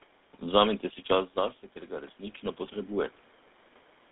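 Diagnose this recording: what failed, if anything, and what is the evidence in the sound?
A buzzy, gravelly roughness runs through the speech from start to finish, and the sound is confined to a narrow band of roughly 250 Hz to 3.6 kHz, with nothing above. This is the GSM full-rate codec, in the codec stage. It models the vocal tract as a filter and drives it with a coarse, regularly spaced pulse excitation that keeps only a fraction of the detail, which fits a 13 kbps stream. The damage is plainly audible throughout.

From 1.1 s to 3.05 s the level swells gradually, voice and background rising together by about 4 dB. This is automatic gain rising, in the call processing stage. Just before it, at around 1.0 s, the talker moved away from the microphone and the input fell by about 12 dB. The automatic gain control read that drop as the signal being too quiet and raised its gain slowly over roughly two seconds. 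Because gain control cannot tell the voice from the room noise, the background climbs along with the speech.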